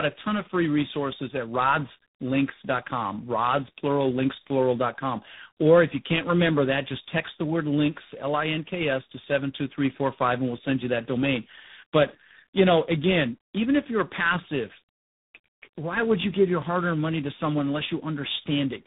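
Throughout, the call went through tandem speech coding: two low-rate speech coders in a row, a narrowband mobile coder and then G.726, the second re-encoding the first's degraded output. The result is rough, muffled, warbly speech with nothing above 3.8 kHz, which fits roughly 6.7 kbit/s followed by 24 kbit/s.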